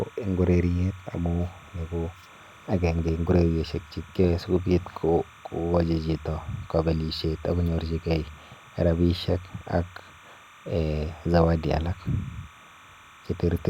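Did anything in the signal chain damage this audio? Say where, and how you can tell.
Yes: timecode bleed runs through the whole speech clip, entering in the analogue wiring. A steady chirping warble alternates near 1 and 2 kHz, roughly 25 dB below the speech, as linear timecode at 29.97 frames per second leaks from an adjacent track or cable.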